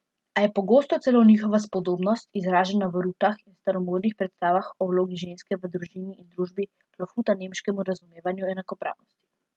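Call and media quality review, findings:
Lost packet rebuilt from error correction: rough, noisier patches with no dropout at 1.73–1.83 s (after "je pogosto celo njihova"), 2.83–2.85 s (before "v rutah"), 3.97–4.03 s and 7.95 s. Opus in-band FEC. Decoder played low-bitrate redundant copies carried in following packets. Spectrogram shows grainier, smeared harmonics. Waveform stays continuous. Longest patch fits three 20 ms frames.

Short concealed packet loss: brief smear/wobble at 7.99–8.07 s, two back-to-back 20 ms holes right after the 7.95 s event. Jitter buffer/decoder concealment. Receiver extrapolated the last sound, then crossfaded back. Waveform shows a smooth synthetic continuation, not silence. Spectrum tops out near 12 kHz, consistent with the Opus call path.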